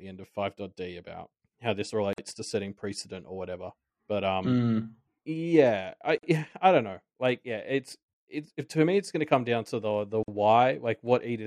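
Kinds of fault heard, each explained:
Gap at a join of encoded pieces: at 2.13, 6.18 and 10.23 s the speech drops into silence for about 49 ms, once every 4 s, then resumes exactly where it broke off. The audio was encoded as separate 4-second pieces and spliced without trimming, so each join keeps the encoder's start-up delay plus the padding of the previous piece's last frame. The codec smears the edges of each silence, so the silent part is shorter.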